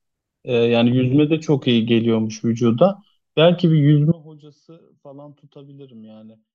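At 4.12 s the speech cuts out abruptly and never returns, leaving only a faint residue, roughly 25 dB below the normal signal level, through to the end of the clip. It is an abrupt drop rather than a pause or fade. This audio dropout to a faint residue most likely comes from the wanted feed being lost while the path downstream stayed live, so only faint sound carried on.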